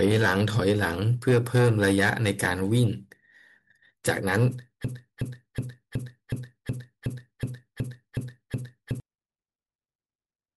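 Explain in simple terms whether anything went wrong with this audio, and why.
From 4.85 to 9.0 s the speech sticks in a broken-record loop: the same 0.37 s snippet plays 11 times back to back, likely because playback stalled and kept resending its last piece. Unlike an echo, each repeat is identical and full-strength, and the speech meant for those seconds is lost.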